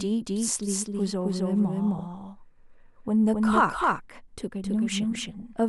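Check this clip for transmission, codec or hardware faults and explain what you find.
Two faults are present: a doubled track throughout, and DAB burbling at two points.

A doubled audio track runs the whole clip. A second copy, about equally loud, trails by roughly 300 ms. A slower capture path is the likely cause.

DAB burbling appears at 1.96–2.04 s and 5.15–5.40 s. Bit errors slip past error correction, making sub-bands jump briefly. It sounds like short blips of noise.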